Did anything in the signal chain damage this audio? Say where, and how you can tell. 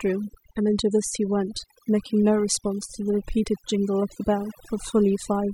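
Yes: overdone noise removal runs throughout this speech clip, at the call-processing stage. Gaps between phrases collapse to near silence flecked with twinkling specks, because an over-aggressive suppressor switches off individual frequency bands near its noise estimate, taking quiet speech detail with them.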